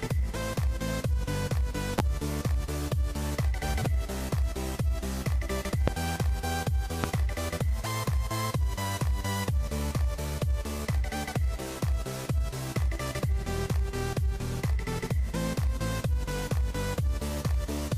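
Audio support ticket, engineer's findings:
Loud pop, three instances: 1.99–2.02 s, 5.88–5.90 s, 7.04–7.07 s. Each a single sharp transient, roughly 30 ms, peaking around 20 dB above the programme level; audio continues uninterrupted underneath. Likely cause: a voltage step or spike entering the chain from a connector, switch contact, static discharge or driver glitch, then shaped by downstream circuitry into a brief thump. Check cabling and switching contacts in the signal path.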